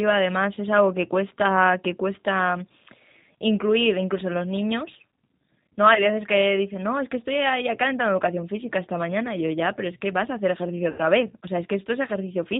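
The whole clip of speech carries the sound of the G.729 codec, most likely G.729A at 8 kbit/s. Nothing above 4 kHz comes through. The voice is rebuilt from a filter, a pitch estimate and a few pulses per frame. So it sounds rough and slightly synthetic, and the damage is plainly audible.

At 5.94 to 6.07 s there is VoIP packet loss concealed by the speech codec. About 20 ms of audio went missing, which points to a single lost packet. The decoder guessed from its last pitch and filter. A brief stretched sound replaces the speech. It stays weakened for a moment after. At 10.90 to 11.02 s a longer gap follows. About 80 ms was lost, which fits a run of several packets. The guess is stretched further here. It fades out before the voice recovers.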